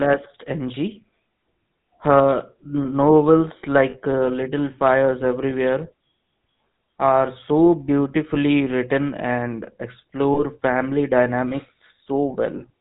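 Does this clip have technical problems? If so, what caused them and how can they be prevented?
Yes. The speech passed through the GSM full-rate codec, whose sound fits a 13 kbps stream. It rebuilds the voice from pulse-driven vocal-tract settings and cuts everything above 4 kHz, so the speech sounds plainly buzzy, gravelly and dull throughout. Sending or recording the speech over a wideband or modern codec such as AMR-WB or Opus would avoid this.

Lost GSM frames occur at 3.9 to 3.97 s, about 40 ms and consistent with two dropped frames, and at 10.34 to 10.43 s, consistent with a single lost frame. The decoder repeated the last good frame, so the sound hangs as a brief rough, metallic ring. Stronger error protection or a more reliable radio link would reduce frame loss.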